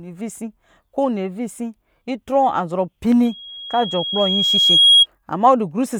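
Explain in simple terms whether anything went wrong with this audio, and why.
Loudspeaker feedback squeal starts at 3.25 s: the microphone hears its own loudspeaker, and one pitch near 3.3 kHz keeps feeding itself. It swells over roughly a second and a half until it's louder than the speech, then stops at 5.06 s. A steady whine wouldn't grow like that.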